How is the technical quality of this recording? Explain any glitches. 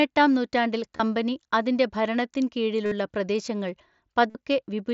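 The speech comes through a wideband Bluetooth headset link, likely mSBC, with its light grain and an 8 kHz ceiling. Three short dropouts break it up. These are concealed Bluetooth headset packet loss, at 0.96 to 1.00 s, 2.85 to 2.92 s just after "അതിന്റെ ഭരണത്തിൻ", and 4.30 to 4.35 s. They last 30, 60 and 45 ms. Packets from headset to phone went missing. The receiver filled each gap by repeating a matching recent stretch of waveform. Each gap sounds like a brief buzzy tone held at full level, with a small warble as real speech resumes.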